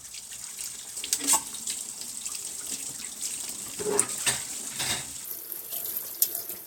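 A recording of sounds that shows a section at the wrong speed from 5.25 s to 6.66 s: playback runs 1.6 times fast, raising pitch about seven semitones, likely a clock mismatch.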